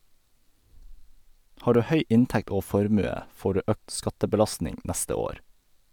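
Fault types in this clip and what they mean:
No fault types can be heard in this clip, so there is nothing to explain about what they mean.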